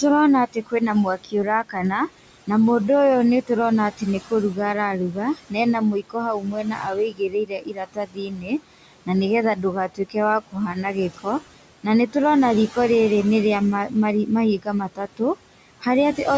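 Noise suppressor artifacts run throughout this speech: the suppressor cuts the room noise, about 16 dB under the speech, by about 18 dB frame by frame, so the background sinks between phrases and returns beneath them. Speech cut by the noise suppressor occurs at 0.01–2.49 s, 3.42–4.58 s, 5.12–12.15 s and 13.88–15.21 s. In these spans the suppressor mistook quiet speech for noise and dropped it by up to about 15–19 dB, leaving parts swallowed or faint. The 5.12–12.15 s span is the worst, with roughly three seconds affected.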